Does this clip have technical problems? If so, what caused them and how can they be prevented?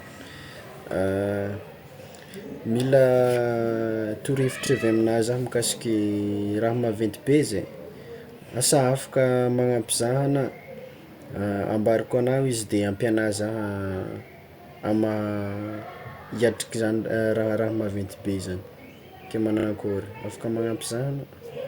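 Yes: repeated frames make the speech stutter at 0.35–0.50, 2.51–2.57, 4.66–4.69, 11.52–11.60, 16.24–16.29 and 19.59–19.65 s. At each point a 20–60 ms block of compressed audio replays up to three extra times, which shows as identical tiled waveform segments with vertical seams on a spectrogram. Checking frame sequence numbers so each frame is written or sent only once prevents it.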